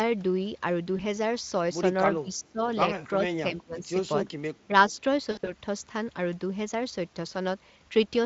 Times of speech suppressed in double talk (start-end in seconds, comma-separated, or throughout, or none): 2.20-2.61, 3.18-3.89, 4.67-4.74